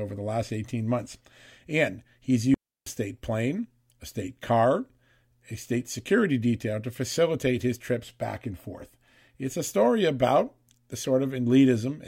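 At 2.54 s the speech drops into a clean hole that lasts until 2.86 s, about 0.32 s of near silence, and then picks up with "state plane a state". That's a digital wireless dropout: the receiver lost too much of the incoming data to rebuild the audio, so it faded itself to mute rather than pass along garbage. You can tell because the gap has no hiss, crackle or burst of noise on either side.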